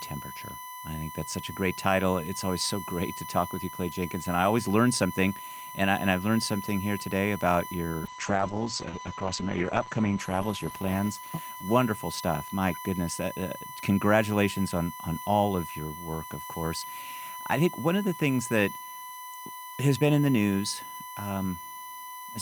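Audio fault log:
throughout: USB whine. A steady, fixed-pitch whine at 1 kHz sits under the speech for the whole clip, roughly 15 dB below it. The USB bus draws current in 1 ms frames, and that pulsing leaks into the audio through the power or ground.
8.07–12.29 s: call bitrate drop. The speech turns rough and muffled, with the top end cut from about 20 kHz to 8 kHz, worst for about 1.9 s. This points to the encoder being pushed from around 64 kbps down to about 10 kbps after the call's bandwidth estimate fell.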